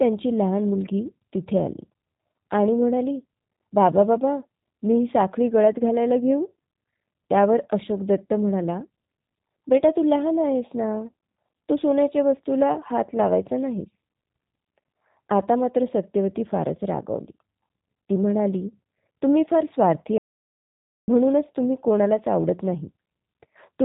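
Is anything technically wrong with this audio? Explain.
Yes. G.729 codec damage runs through the whole speech clip. The codec rebuilds each 10 ms frame from a vocal tract filter, a pitch predictor and a few pulses, which fits an 8 kbit/s stream. Nothing above 4 kHz survives, and the voice comes across plainly rough and synthetic.

An audio dropout to silence runs from 20.18 to 21.08 s, about 0.9 s. The input was likely lost, and the recording kept writing silence. The speech cuts off abruptly into dead silence with no room tone, then resumes mid-flow.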